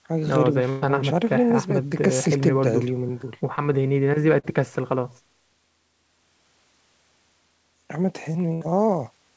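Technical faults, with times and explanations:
0.70–0.84 s and 8.53–8.63 s, burst of packet loss: a run of packets went missing, about 120 ms the first time and 80 ms the second. The receiver stretched the last bit of speech and faded it out, so you get a held buzz or fading hiss, then the speech jumps ahead with that stretch gone.
3.56–3.59 s and 4.39–4.45 s, short concealed packet loss: roughly 20 ms and then 40 ms of audio arrived too late for the decoder. It patched each hole by carrying the previous sound forward and blending back in, which leaves a quick smear or wobble in the speech.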